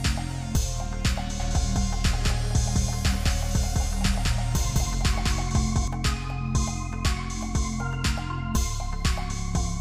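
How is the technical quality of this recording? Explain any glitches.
The recording has one clear problem: a doubled audio track from about 1.40 s to 5.88 s. For that stretch a second copy of the whole sound runs roughly a fifth of a second behind the first, at about the same level, so everything gets an odd flam-like echo. It's dry and full-range, with no room tail, and it switches in and out abruptly. The likely cause is the same signal being picked up twice, once through a slower path, or an edit leaving two out-of-step copies stacked.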